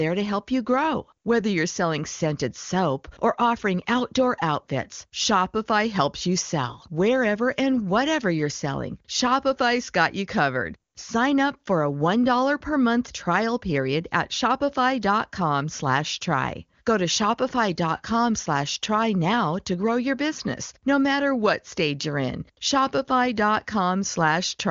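Nothing is technically wrong with this speech clip, which has the top-end cut near 7.2 kHz that comes with AMR wideband (HD Voice) coding at its highest rate of 23.85 kbit/s.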